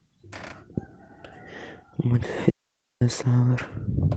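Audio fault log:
2.50–3.01 s, audio dropout to a faint residue: the speech cuts out abruptly for about half a second, and the gap holds only low hiss, roughly 55 dB down. The line stayed live while the signal itself went missing, likely an upstream feed or capture interruption rather than a pause.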